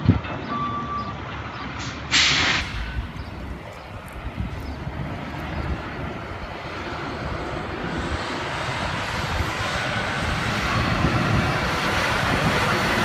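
From 0 to 2.61 s the audio is dull and boxy, with nothing above 7.6 kHz, a level shift of around 5 dB and background noise roughly 30 dB below the signal. At 2.61 s it clears abruptly, without a gap. The input had likely switched to a poorer device.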